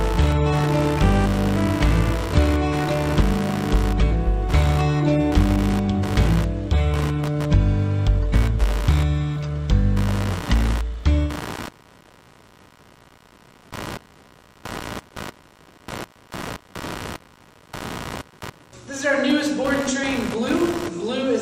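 Computer activity noise runs through the whole clip: a buzzing, chirping layer pulsing at around 70 times a second, roughly 15 dB below the sound. Processor or graphics load is shifting the audio circuit's shared ground. A spectrogram shows evenly spaced vertical striations unrelated to the audio.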